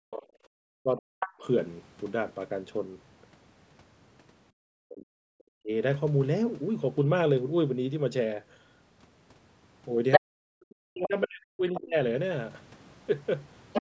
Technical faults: speech suppressed in double talk; other side's voice leaking through; background gated by the echo canceller

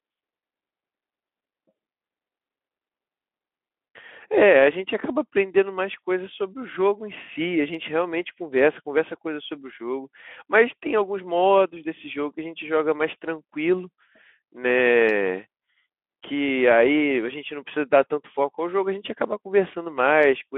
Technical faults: none

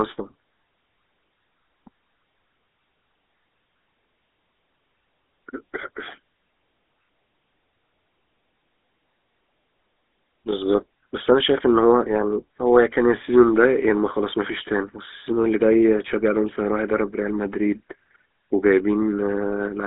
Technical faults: GSM full-rate codec

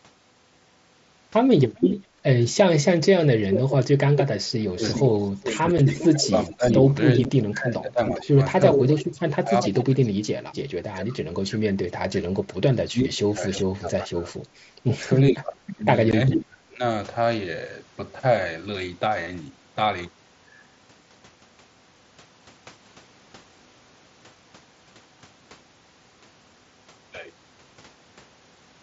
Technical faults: echo leak; background gated by the echo canceller; speech suppressed in double talk; unconcealed Bluetooth headset packet loss

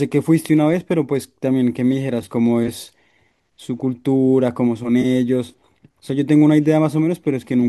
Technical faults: AAC frame loss with concealment

